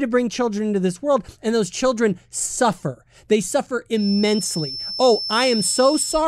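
From 3.92 s to the end of the speech, a thin, steady feedback whistle sits behind it at 5.3 kHz, roughly 10 dB below the voice. It swells and fades slowly in level. The likely cause is a loudspeaker-to-microphone loop held right at the edge of feedback.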